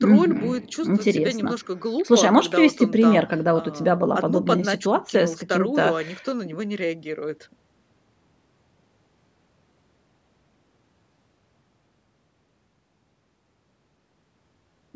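Nothing technically wrong can be heard in this speech recording. It has passed through a call's microphone processing, which leaves no content above 8 kHz and trims the lowest bass as expected.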